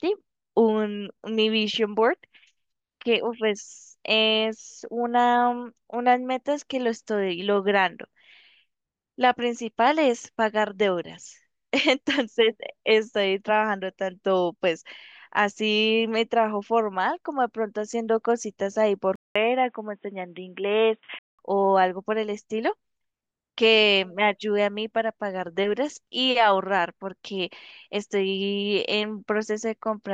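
At 19.16 s the recording most likely switches its input to a poorer device, such as a headset running its call profile, and it stays there until 21.39 s. A gap of about 200 ms of silence marks the switch. For those two seconds nothing above 3.8 kHz comes through, so the speech turns dull and boxy. A faint new background noise sits far below the speech, and the loudness holds steady. At 21.39 s the full, clear sound returns.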